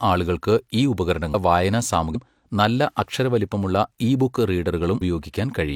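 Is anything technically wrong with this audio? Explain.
Yes. There is damaged data in the compressed stream of this speech. Brief blips occur at 1.30 to 1.35 s, just after "ആളുകൾക്ക് ഈ", at 2.11 to 2.16 s, and at 4.97 to 5.02 s. Corrupted bytes make the decoder misread frames and lose sync, producing short glitches.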